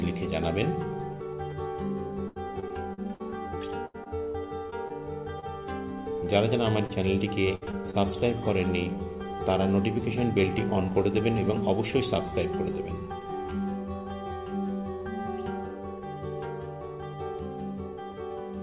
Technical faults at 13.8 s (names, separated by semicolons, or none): none